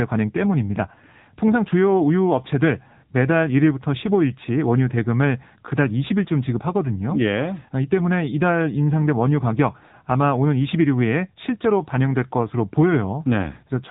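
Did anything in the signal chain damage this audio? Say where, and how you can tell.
Yes, at the codec stage: this speech has been through an AMR narrowband mobile codec for the whole clip. Nothing gets past 3.8 kHz, and the vocal-tract model sounds audibly buzzy and synthetic, which fits one of AMR-NB's lower modes, around 8 kbps.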